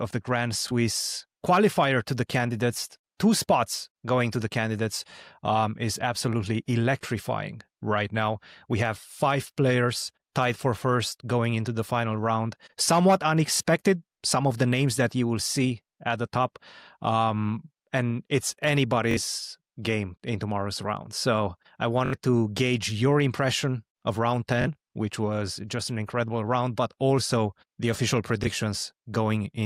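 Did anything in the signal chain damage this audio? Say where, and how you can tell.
Yes, a Bluetooth stutter on the wireless link: at 0.68, 13.57, 19.11, 22.06, 24.62 and 28.44 s, a slice of about 21 ms repeats one to three times (21 to 64 ms). Unlike a dropout, the gap is filled with repeated audio rather than silence, pointing to lost packets.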